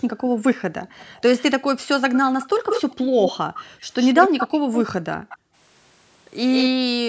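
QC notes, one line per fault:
0.0–0.94 s, 3.54–3.85 s, 5.05–5.56 s: background gated by the echo canceller. In each span the room tone drops away sharply, by up to about 40 dB, then returns. The first dip covers most of the opening second, the second is brief, and the third lasts under half a second. This happens because the canceller clamps the microphone hard while far-end audio plays on the loudspeaker and releases it when that audio stops.
0.89–1.43 s, 2.13–4.82 s, 5.29–5.38 s, 6.53–6.69 s: echo leak. A delayed copy of the speech sits under the main signal. In the first span it trails by 283 ms and is faint, roughly 25 dB down. In the later spans it trails by 157 ms. From 2.13 to 4.82 s it is strong, only about 5 dB below the speech, and at 5.29 and 6.53 s it is lower. The likely cause is a loudspeaker-side echo canceller letting part of the picked-up playback through and sending it back.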